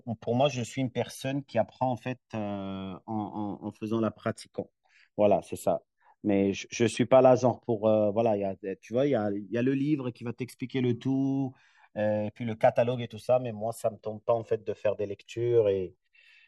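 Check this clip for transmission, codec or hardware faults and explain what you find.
One fault runs through the whole speech clip: the channels drifting apart. The left and right signals seem to come from two devices running on separate clocks. The offset between them grows steadily and reaches roughly 2 ms by the end. That rate fits a clock mismatch of around 200 parts per million. When the channels are summed to mono, comb-filter notches slide slowly through the spectrum. The result is a gradual, sweeping flanging on the speech.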